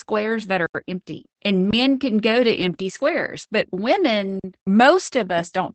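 A speech recording carrying Opus voice compression throughout. At about 12 kbps in SILK mode, nothing remains above 8.7 kHz, and the voice sounds muffled and slightly hoarse. There are two underruns with held sample. The sound freezes flat from 0.66 to 0.75 s, just before "empty and men can", and again from 4.40 to 4.44 s. Playback then resumes where it stopped, so each gap ends softly. The 85 ms and 43 ms pauses fit buffers of 4096 and 2048 samples at 48 kHz.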